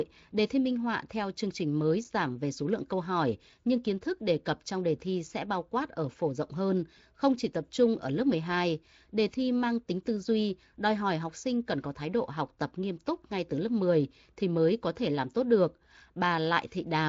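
No technical faults in this speech recording; the band stops near 7.6 kHz, consistent with a wideband Speex path.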